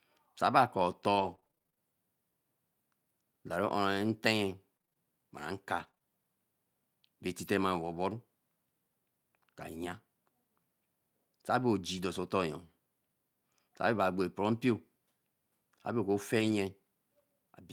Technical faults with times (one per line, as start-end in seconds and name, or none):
1.15-1.80 repeated packet loss (robotic sound)
4.77-7.32 scattered short gaps
11.98 lost packet rebuilt from error correction
13.98 lost packet rebuilt from error correction
16.40-16.54 lost packet rebuilt from error correction